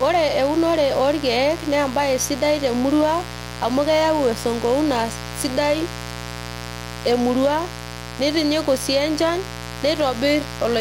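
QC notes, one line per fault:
Throughout: mains buzz on a 60 Hz supply, sitting roughly 10 dB below the speech, a raspy rather than humming tone. Sharp switching spikes twice per cycle spread harmonics of 60 Hz up into the kilohertz range, seen as evenly spaced horizontal lines across the spectrogram.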